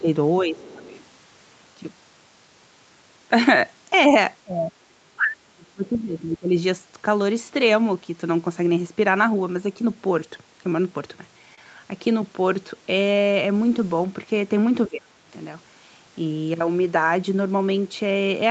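Right at the start the speech gets pushed down: 0.0 to 0.09 s and again 0.42 to 0.92 s, both dipping by about 10 dB. That's speech suppressed in double talk, and the likely cause is the echo canceller seeing the far end active at the same moment, failing to separate the two, and ducking everything. Later dips are much deeper, about 30 dB at 4.43 to 4.72 s and 5.12 to 6.55 s, where the talker nearly drops out, and about 25 dB at 14.87 to 15.30 s.

Overlapping that early dip, from 0.56 to 1.04 s, the other side's voice is leaking through. A faint second talker sits roughly 25 dB under the main speech. It's likely residual loudspeaker echo the canceller didn't fully strip from the mic, so it comes across as a background voice rather than anything loud.

At 11.55 s there's a short stall from a late packet. A packet didn't arrive on time, the jitter buffer ran dry, and the receiver held the last bit of sound for about 28 ms until it turned up. 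Nothing is lost, but that sound hangs a touch too long and the timing shifts by those 28 ms, with a slight buzz or dip. The top end stops at 8 kHz throughout, which is just the call path's normal bandwidth.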